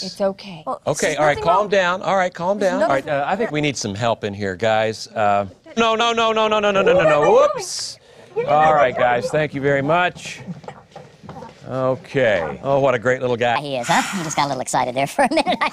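The last couple of seconds go wrong: from 13.56 s right through to the end at 15.73 s there's a section at the wrong speed, running about 1.36 times too fast. Because speed and pitch move together here, the sound jumps up by roughly five semitones and turns noticeably hurried and chipmunky all at once. The most likely cause is that this stretch was played back or rendered against the wrong clock rate.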